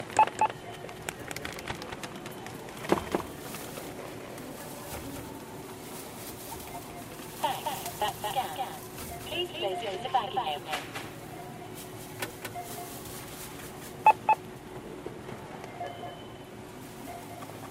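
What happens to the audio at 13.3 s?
At 13.3 s, as throughout the clip, every sound is followed by a dry copy about 5 dB quieter about a fifth of a second later, giving a flat slapback echo with no room tail. This doubled audio track is likely a second, slower capture path mixed in alongside the original.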